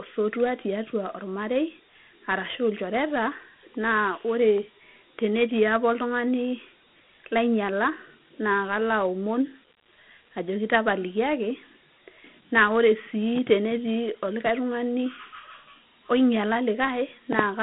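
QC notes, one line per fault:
Throughout, Dialogic VOX ADPCM: the speech sits in a narrow phone-line band of roughly 150 Hz to 3.5 kHz, with nothing at all above 3.9 kHz. Each sample is coded as a small 4-bit step from a predicted value rather than stored outright, so the coder can't keep up with fast changes and leaves a plainly audible grainy hiss riding on the speech. The bandwidth and grain fit the OKI flavour at about 32 kbps.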